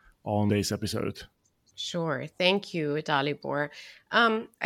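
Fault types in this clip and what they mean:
Compressed frames skipped: a run of compressed frames was never played, either missing from the file or rejected by the decoder as damaged, so playback jumps straight past them. At about 0.50 s the speech lurches forward by roughly a third of a second, which fits about ten frames of 32 ms each. The two sides of the gap are butted together, leaving a sudden break in continuity with a brief disturbance at the join.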